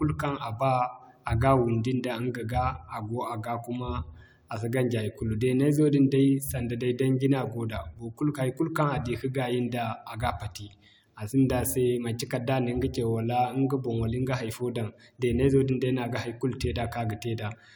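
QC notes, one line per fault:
No faults turned up anywhere in this speech recording on a listen-through.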